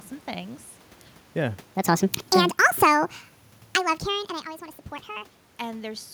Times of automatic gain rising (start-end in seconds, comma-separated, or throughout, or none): 2.39-3.28, 3.81-4.19